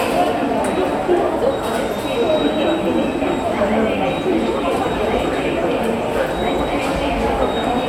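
Nothing's wrong with this bit of everyday sound; I can't pick out a single technical problem anywhere in it.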